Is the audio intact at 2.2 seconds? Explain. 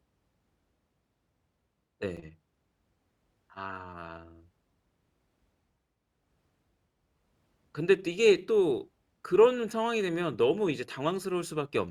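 No. At 2.17 s the speech has an overlapping-chunks fault: a new chunk starts before the previous one ended, so about 7 ms of audio plays twice at the join, which fits 5-second chunks. It sounds like a brief click. On a waveform it appears as a sudden discontinuity with a short repeated segment, and on a spectrogram as a thin vertical broadband line.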